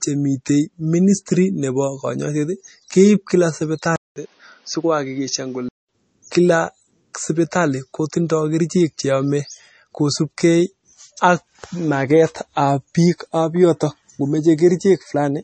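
Throughout the recording, the speech has likely been squeezed through MP3 compression at a starved bitrate, consistent with something around 32 kbps. With so few bits to spend, the encoder discards everything above about 8.4 kHz and drops weak frequency components that flicker in and out between frames. The result is plainly audible: a dull top end, a watery, swirling texture, chirpy sibilants and softened consonant attacks.

From 3.96 s to 5.89 s, the input likely switches to a poorer device. The change begins with a 200 ms silence, after which the band closes further, leaving nothing above about 6.6 kHz. The speech turns noticeably duller and boxier and drops a few decibels in level, and a new background noise floor appears well beneath it. At 5.89 s the fuller sound returns.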